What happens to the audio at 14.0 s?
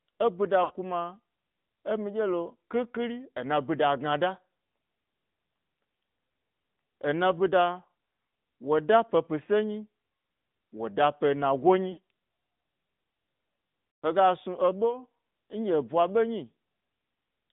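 From 13.99 to 14.05 s the sound smears into a brief, drawn-out warble and sags in level before returning a little weak and rough. These are lost AMR speech frames. Radio errors corrupted a short run of consecutive frames, so the decoder stood in for them by repeating its last good pitch and vocal-tract settings at steadily falling gain, which stretches and fades the sound instead of cutting it cleanly.

Around it the AMR narrowband mobile codec is plainly audible. The sound is confined to roughly 150 Hz to 3.7 kHz, and its buzzy, synthetic texture fits a rate near 10.2 kbps. It comes from a vocal-tract model fed by only a few pulses per subframe.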